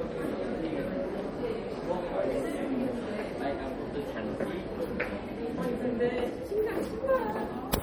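Throughout the clip the sound turns watery and swirly, with a dulled top end, metallic chirps on bright sharp detail, and smeared attacks. This is likely MP3 compression, with bits too thin for the material, which fits a bitrate around 48 kbps.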